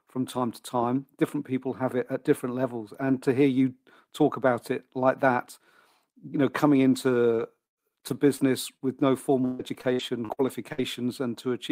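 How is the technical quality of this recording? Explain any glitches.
The call has dropouts in its second half. Repeated packet loss (robotic sound) hits 7.35–8.41 s (four gaps, longest 112 ms) and 9.45–10.82 s (six gaps, longest 142 ms). Each hole gets patched by extending the last sound, so speech turns choppy and robotic.

Between them, short concealed packet loss at 8.77–8.86 s drops about 40 ms, and the decoder bridges the hole with a quick smear.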